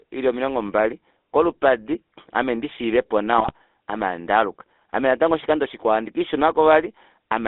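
Across the whole clip, the speech carries the buzzy, gravelly texture of the GSM full-rate codec, which fits 13 kbps GSM full rate. The codec rebuilds the voice from a vocal-tract filter driven by a sparse, regularly spaced pulse train, so fine detail between pulses is lost and voiced sounds turn rough. The band is held to roughly 250 Hz to 3.6 kHz, so the sound is thin at the bottom and dull at the top.

From 3.38 to 3.52 s, between "mbali kolupadi ame ndishiiveppo" and "ame handaaluka ame natango", GSM bit errors break up the signal. Corrupted bits reach the decoder, so the filter, pitch and gain values are wrong for a short run of frames. The spectrum bends and the level jumps, and the speech turns into a brief gargling squawk. The damage, a little over a tenth of a second, points to an error rate of about 2 percent spread across roughly six frames.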